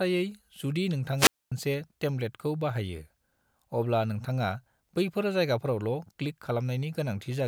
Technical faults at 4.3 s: none

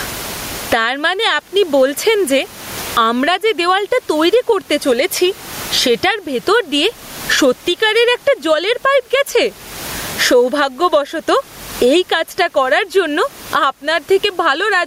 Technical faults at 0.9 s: gain pumping

